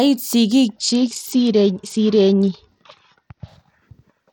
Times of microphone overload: none

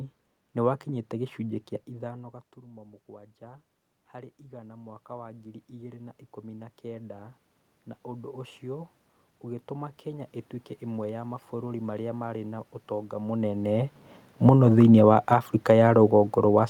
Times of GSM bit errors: none

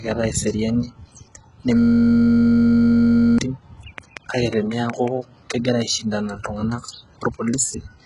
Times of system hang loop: 1.77-3.38

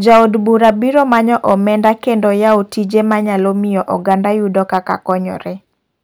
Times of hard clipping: 0.07-1.90, 2.46-2.56, 2.96-3.15, 4.09-4.14, 4.58-5.13

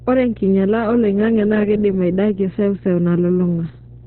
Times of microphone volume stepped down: none

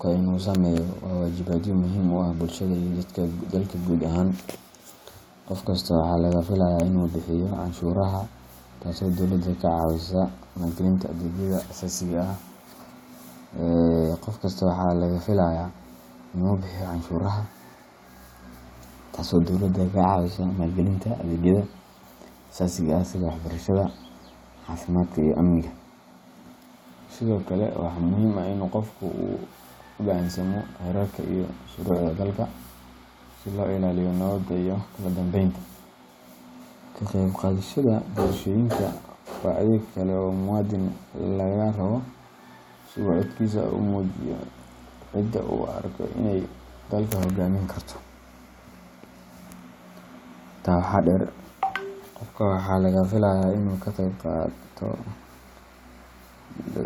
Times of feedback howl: none

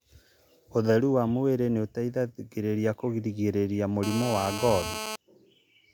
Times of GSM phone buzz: 4.03-5.16

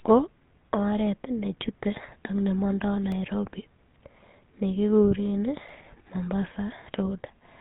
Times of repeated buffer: 3.12, 5.69

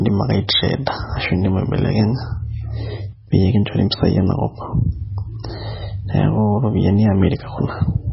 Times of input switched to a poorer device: none

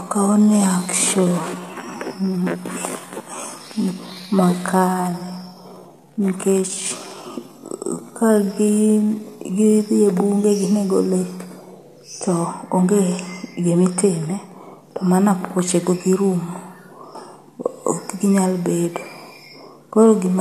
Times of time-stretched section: 0.00-9.76

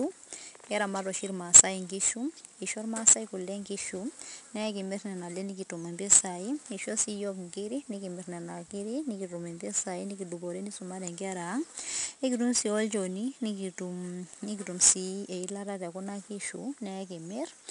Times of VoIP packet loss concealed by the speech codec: none

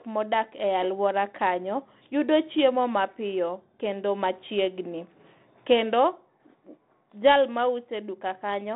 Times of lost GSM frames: none

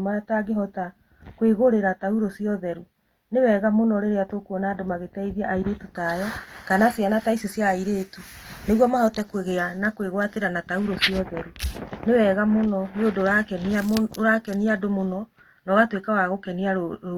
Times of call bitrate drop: none

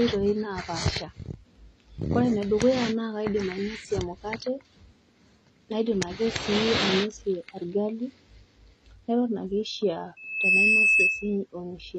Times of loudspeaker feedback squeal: 10.16-11.37

